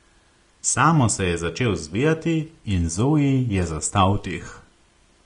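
Throughout the speech, the encoder has likely run Vorbis compression at a low setting, roughly what a bitrate near 34 kbps would give, quantising the treble coarsely. Nothing survives above 10.5 kHz, and the upper range turns hissy and grainy, with roughened tones and softened consonant attacks.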